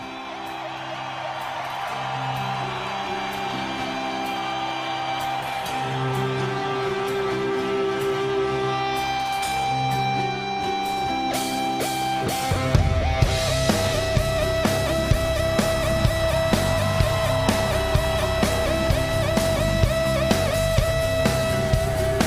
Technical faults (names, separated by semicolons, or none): none